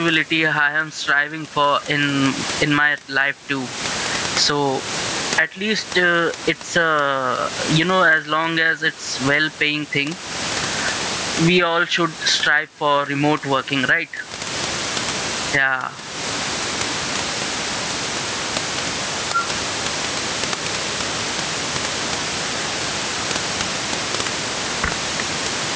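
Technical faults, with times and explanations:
Throughout, gain pumping: a gain swing of around 25 dB, so loud and quiet passages sit unnaturally close and the sound feels squashed. The likely cause is input gain set far too high, with a fast limiter clamping on each loud syllable and releasing in the gaps; the room noise sits about 31 dB below the speech.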